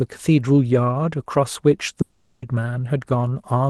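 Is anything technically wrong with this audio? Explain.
Yes. From 2.01 to 2.44 s the speech stops being carried and is replaced by a stretched, buzzy continuation of the last sound that fades over the gap without ever dropping to silence. When the speech resumes, roughly 0.4 s of it is simply missing. This is a long network dropout. The likely cause is packets not arriving at the receiver, so its loss concealment kept extrapolating the final fragment across the gap. The speech itself sits on an Opus call path band-limited at about 12 kHz.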